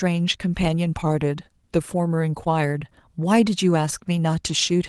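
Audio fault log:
No faults are heard in this speech. The WebRTC call path can be heard working normally, with the top of the band stopping near 12 kHz, which fits an Opus call codec at a modest bitrate.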